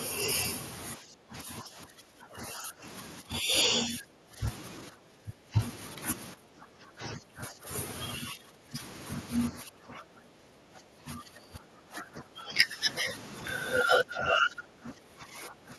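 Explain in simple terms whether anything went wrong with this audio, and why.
Speech suppressed in double talk at 0.98–2.85, 3.21–4.41, 4.9–5.59, 6.34–7.69, 8.19–8.77, 9.51–12.85, 13.01–13.08 and 13.83 s to the end. The speech keeps sinking, thinning or breaking up, likely because the echo canceller mistook it for loudspeaker echo while both sides talked and turned it down.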